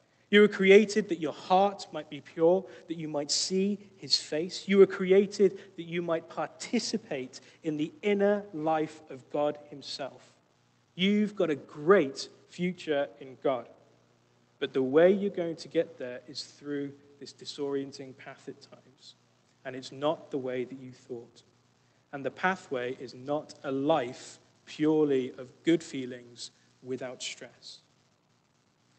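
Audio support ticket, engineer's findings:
No faults found on listening. The call path is audible as codec texture and a top end that stops at about 8 kHz, which fits Opus at around 32 kbps.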